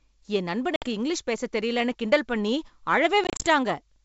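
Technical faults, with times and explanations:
0.76–0.87 s, packet loss on an ADPCM call: the sound drops into hard-edged silence for about 60 ms, which fits roughly seven lost packets. The speech then resumes on "இங்கிலீஷ் பேச தெரியலைன்னு கிண்டல்" slightly distorted, because the decoder's adaptive predictor and step size have drifted from the sender's and need some tens of milliseconds to realign.
3.24–3.44 s, packet loss on an ADPCM call: a stutter of short gaps, none longer than 30 ms, removes about 100 ms of audio spread over 180 ms, pointing to roughly ten lost packets. Each restart carries a moment of distortion while the wideband G.722 decoder's state resettles.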